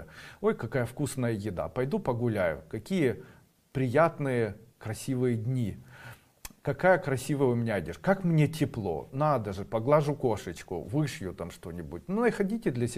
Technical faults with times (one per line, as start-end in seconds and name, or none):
none